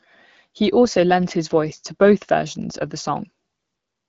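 Nothing to flag: the speech rides an AMR wideband (HD Voice) link at 12.65 kbit/s, with only the light coding damage that rate leaves.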